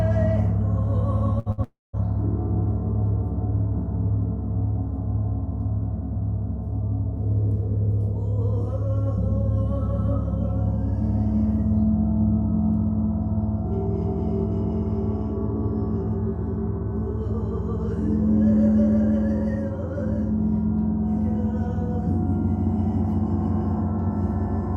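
Two bursts of packet loss come close together, at 1.39 to 1.49 s and again at 1.52 to 1.61 s. Each time a short run of packets failed to arrive in time, and the receiver covered the hole by extending the last sound it had, turning it down as the gap went on. That gives a brief held buzz or hiss of about 60 ms, then the audio picks up roughly 60 ms further on, with that piece skipped.

From 1.64 to 1.96 s the stream falls away for longer, most likely a long network dropout in which nothing reached the receiver for around 0.3 s. The concealment first stretches the last sound as a fading tone, but this cannot hold, and for about 200 ms only silence or faint steady noise remains. When the audio returns it has jumped ahead by roughly 300 ms, so that stretch is simply gone.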